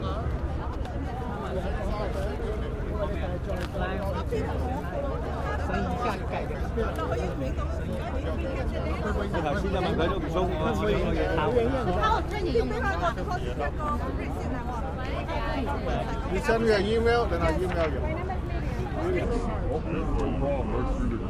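From 19.25 s to the end, the sound has a wrong sample rate. It plays at about 0.73 times its proper speed. Pitch drops by about 5.5 semitones. Everything turns low and sluggish together, which fits 44.1 kHz material played back at 32 kHz.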